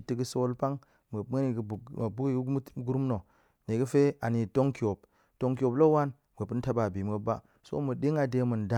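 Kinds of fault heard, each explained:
No technical fault can be heard in this speech recording. There is nothing to list under any heading.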